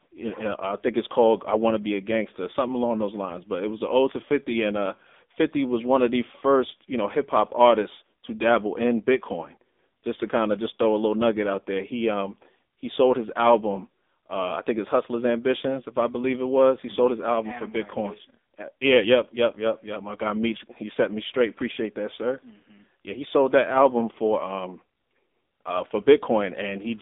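AMR narrowband mobile codec damage runs throughout. The speech is squeezed into a telephone band of about 250 Hz to 3.7 kHz, nothing above 3.8 kHz, and the heavy buzzy, synthetic quality fits a low mode around 6.7 kbps.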